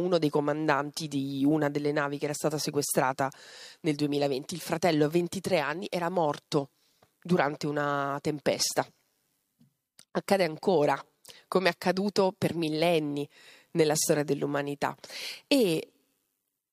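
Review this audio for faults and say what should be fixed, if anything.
Nothing needs fixing, as the speech signal shows no technical faults anywhere in the recording.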